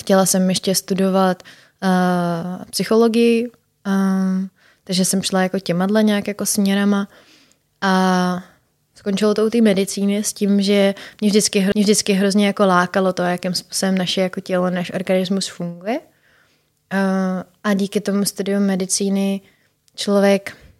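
At 11.72 s, right after "medicíny s tím že", the speech has a CD skip. The laser lost its place on the disc's spiral and landed on a different turn. The player mutes very briefly, for something like ten milliseconds, so you hear a small tick. Then the talk carries on from another point, coming back in at "jako lákalo to jakým". The join sounds abrupt, with the flow jumping instead of running on.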